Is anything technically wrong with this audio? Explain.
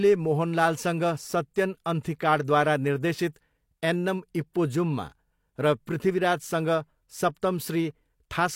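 Yes, there's pre-echo at 4.53 to 4.55 s, right after "अन्थिकाडद्वारा निर्देशित एन्नम्": the codec's block noise smears about 23 ms ahead of an attack, so a short hiss precedes it and softens it.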